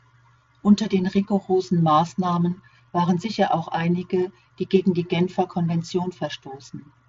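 No faults can be heard.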